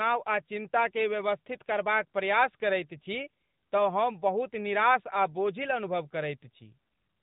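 From start to finish the speech sounds boxed-in and telephone-like, with a plainly audible buzzy, slightly synthetic edge and nothing above about 3.8 kHz. This is the AMR narrowband mobile codec. It rebuilds the voice from a vocal-tract model excited by a few pulses per short sub-frame, at a narrowband sampling rate that cuts off the top end. The moderate artificial roughness fits one of its mid-rate modes, around 10 kbps.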